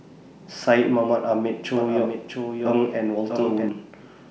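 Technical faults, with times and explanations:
1.77–3.69 s, doubled audio track: a second full-band copy of the speech runs roughly 0.7 s behind, around 5 dB quieter, likely from a slower capture path. Unlike room echo it has no decay or reverberant colour, and it starts and stops abruptly.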